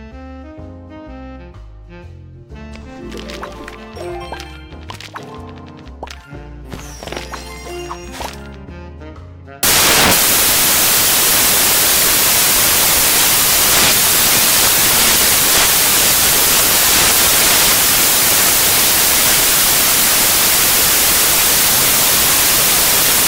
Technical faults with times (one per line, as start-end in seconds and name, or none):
9.63-23.27 samples built from the wrong bytes